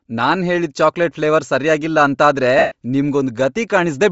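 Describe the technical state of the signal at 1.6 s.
At 1.6 s the speech carries likely Bluetooth LC3 compression, present throughout: upper bands zeroed and noise-filled, giving a grainy, breathy edge and, on a spectrogram, a blotchy, smeared top.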